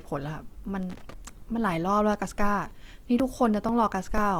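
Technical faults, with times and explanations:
Throughout: Opus compression, likely, going by the damage. It is plainly audible across the speech. Bands are kept filled rather than left empty, so there is little swirl. Instead the tone turns grainy, rough and noisy, as if detail were rebuilt from noise or copied up from lower bands. That behaviour points to the codec's music mode at a low rate, which fits about 24 kbps. Bandwidth stays wide, with content reaching about 20.2 kHz.
0.83 to 1.14 s: loose connector crackle. A short, irregular burst of scratchy crackle sits on the sound for about 0.3 s. A worn or dirty contact is making and breaking as it shifts. Each break chops the signal, and any small DC on the line turns the jumps into pops. The timing is uneven, which is why it reads as scratching rather than a steady tick. Then it stops.
2.22 to 4.18 s: periodic USB or driver dropouts. 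Regular ticks appear about every 0.49 s, around five of them. At each one roughly 10 ms of audio is skipped outright, with no silence inserted, so the sound jumps forward. The even spacing points to a background task stalling the USB bus or audio driver on a fixed schedule. Each skip leaves a sudden discontinuity, heard as a click while sound is present.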